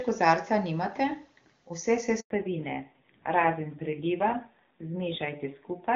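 At 2.20 s the speech cuts out in a handover gap lasting 100 ms, until 2.30 s. The phone was switching the call between networks, and no speech frames arrived during the changeover. The sound falls away within a few tens of milliseconds instead of ending naturally, leaving a short dead hole. Whatever was said in that tenth of a second is gone and does not reappear afterwards.

From 2.30 s to the end, the call shows a fallback to narrowband. Before the gap the wideband HD Voice path carries clear speech with content up to about 7 kHz. After it, nothing remains above 4 kHz, so sibilants and breathiness lose their edge and the voice sounds muffled and rougher. That change fits a drop from AMR-WB at 23.85 kbit/s to the older AMR-NB codec at 7.4 kbit/s.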